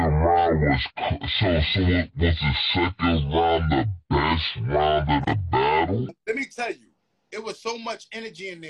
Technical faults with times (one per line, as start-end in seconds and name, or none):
0.00-6.09 section at the wrong speed